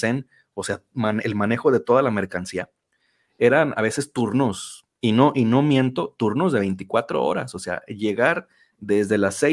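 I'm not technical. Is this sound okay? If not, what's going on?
Yes, nothing wrong turns up anywhere in this recording.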